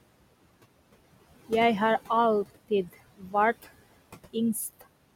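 Right from the start there are noise suppressor artifacts running through the whole clip. The room noise sits about 15 dB under the speech, and the suppressor pulls it down by about 21 dB in the gaps, then lets it come back up under the talking. It judges each band frame by frame, so the leftover noise pumps in and out.

Then from 3.18 to 3.34 s we get speech cut by the noise suppressor. For a stretch of around 150 ms it mistakes part of the speech for background and turns it down with the noise, by about 17 dB at the deepest point. That bit of speech sounds swallowed and faint, as if it drops behind the rest for a moment before the level comes back.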